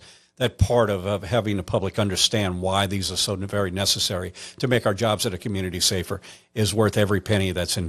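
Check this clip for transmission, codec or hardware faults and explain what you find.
One codec fault runs through the whole recording. MP2 compression, throughout the clip: the speech sounds dull and muffled, with a gurgling, granular roughness on every phrase and upper frequencies that seem to drop in and out. The likely cause is an MPEG Layer II encoder starved of bits, which fits a rate around 80 kbps. Layer II divides the spectrum into 32 sub-bands and shares out bits among them. Here there are too few, so upper bands get switched off and the remaining ones are coarsely quantised.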